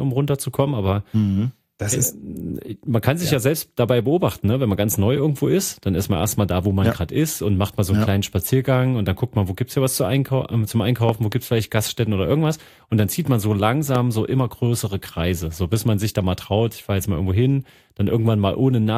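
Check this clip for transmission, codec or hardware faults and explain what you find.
Three loud pops break into the speech, most likely from an electrical step or pulse, such as a plug, switch, static discharge or driver glitch, entering the signal path. The downstream circuitry shapes each pulse into a sharp transient. From 11.09 to 11.34 s there are two pops in quick succession, peaking well above the speech level. At 13.95 to 13.97 s a single, somewhat weaker pop lands. The speech continues underneath both.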